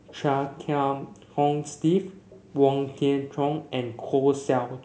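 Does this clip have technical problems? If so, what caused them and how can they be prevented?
Yes. The background is gated by the echo canceller at 0.00–0.07, 0.49–0.72, 0.94–1.37 and 2.11–2.30 s, and from 3.19 s to the end. Room tone drops by about 40 dB, which shows as near-silent gaps in the waveform and blank patches in the spectrogram's noise floor. Gentler suppression with comfort-noise fill prevents it.

An echo leak is heard at 0.07–0.15 and 2.30–2.53 s as a faint copy of the sound, about 25 dB down and delayed 328 and 330 ms. It is likely loudspeaker sound slipping past the echo canceller. A spectrogram shows weak repeated harmonics offset in time. A headset or better-tuned echo cancellation prevents it.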